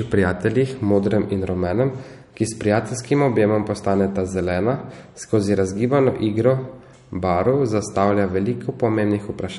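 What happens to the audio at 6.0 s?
At 6.0 s the speech carries the same damage it has throughout the clip: nothing above 11.1 kHz, and a watery, swirling texture on sibilants and consonant attacks. The likely cause is MP3 compression starved of bits, which fits a low bitrate around 48 kbps. With so little to spend, the encoder drops the treble and zeroes weaker frequency lines that flicker on and off between frames, producing that chirpy smear.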